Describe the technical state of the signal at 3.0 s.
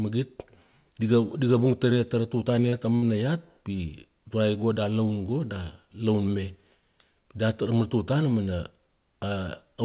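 At 3.0 s there's a burst of packet loss running from about 2.96 to 3.05 s. The receiver papers over the gap by stretching and fading the last sound for roughly 60 ms, then jumps ahead, so about 60 ms of the speech is simply gone.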